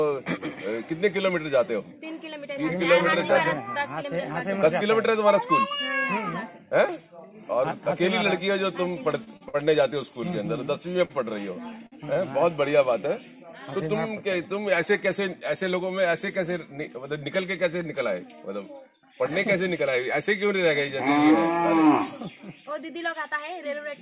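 Late or slowly arriving packets repeatedly emptied the jitter buffer, causing repeated stalls (stutter) between 9.24 and 9.56 s and again between 11.05 and 12.18 s. Each stretch has three short gaps, the longest about 50 ms, which the receiver filled by continuing the last sound, so the audio drags and hiccups without losing anything. Later, an overfull jitter buffer triggered a jitter buffer speed-up, trimming around 70 ms each time in small pitch-period pieces. From 15.08 to 15.63 s the audio runs at 110% speed, noticeably hurried at unchanged pitch. From 21.86 to 23.53 s it runs at 103%, slightly faster but short of sounding hurried. Throughout, the band stops at 4 kHz, consistent with a G.711-type call codec.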